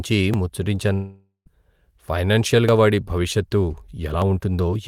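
At 0.34 s the sound jumps forward, skipping roughly 40 ms. This is likely a dropped buffer (overrun), where samples were overwritten before being read. At 4.22 s a smaller skip of about 10 ms gives a second, shorter jump.

From 0.93 s to 1.48 s the speech is replaced by a continuation of the last sound that decays as a buzz or hiss, then roughly 120 ms of silence. The likely cause is a long network dropout. About 520 ms of audio never arrives, and speech resumes past the gap.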